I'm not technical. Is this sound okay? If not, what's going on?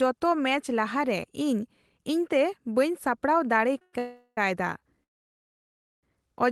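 No. At 3.78 to 3.82 s the speech briefly sticks, with one sound held a fraction too long and a faint buzz or dip. This is a short stall from a late packet: a piece of the call arrived late, so the last sound was stretched until it came, and nothing was lost.

Right after that come three longer halts: 3.82 to 3.94 s, 3.99 to 4.38 s, and 5.03 to 6.04 s. In each, the sound turns into a fading buzz or hiss and then quiet. The last one is almost a full second of silence. These are call audio freezes, likely caused by pieces of the call being held up along the way. The speech then picks up exactly where it stopped, so nothing is missing, but gaps have been added.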